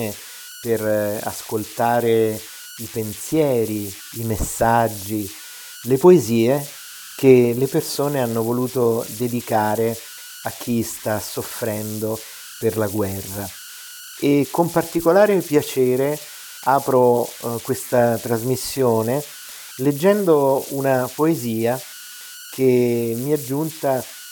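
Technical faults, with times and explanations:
Throughout, converter idle tones: a whistle around 1.5 kHz sits in the pauses, with grainy noise under the quieter speech, about 17 dB below the signal. The undithered delta-sigma converter settles into repeating bit patterns whenever the input gets small.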